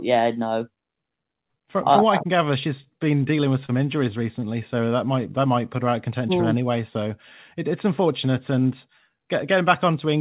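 At 3.66 to 3.70 s, right after "she's been dealing with", and again at 4.40 to 4.44 s, there is a short stall from a late packet. Each time the jitter buffer ran dry and the receiver held the last sound for about 29 ms and then 16 ms, with a slight buzz or dip. Nothing is skipped, which sets it apart from packet loss: the audio simply resumes a little later, over a band that stops at 4 kHz.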